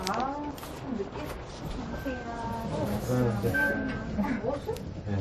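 From start to finish the audio has nothing above 14.6 kHz, with a smeary, warbly texture layered over a second kind of roughness. That mix points to transcoding between lossy codecs, likely a low-rate MP3 around 39 kbit/s re-encoded to WMA around 64 kbit/s.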